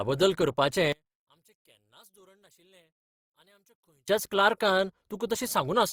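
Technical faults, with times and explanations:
Throughout: Opus compression. The speech has a plainly audible grainy, rough texture, with noisy fill where clean detail should be. Energy stays spread across the bands, so there is little swirl. Instead, tonal parts turn coarse. The bandwidth still reaches about 20.4 kHz, so the sound is not muffled. The likely cause is Opus in its music (CELT) mode, starved of bits. The damage fits a low rate near 24 kbps.
0.92 to 4.08 s: one channel inverted. For about three seconds the speech nearly disappears when the channels are summed to mono, falling by about 35 dB. What remains is a faint trace. The likely cause is reversed polarity in one stereo channel. The centred voice is almost identical in both channels, so the two copies cancel each other in the sum. Only their small differences survive.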